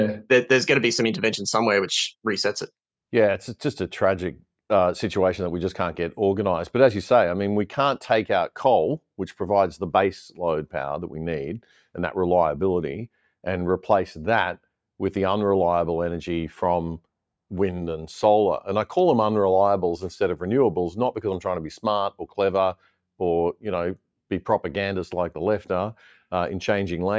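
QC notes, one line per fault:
22.11–22.38 s, sound cut by the noise suppressor: the suppressor mistook this sound for background noise and pulled it down by about 12 dB for roughly a fifth of a second. Unlike a dropout, the sound never vanishes. It sinks in level.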